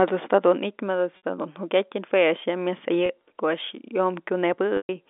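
Packet loss with pitch repetition occurs at 1.17–1.21 s (60 ms lost), 3.06–3.09 s (30 ms) and 4.77–4.89 s (120 ms). The receiver loops the last pitch period across each gap, giving a brief buzzy hold. The longest fades toward silence before speech resumes. The G.711 telephone band, roughly 250 Hz to 3.6 kHz, is audible throughout.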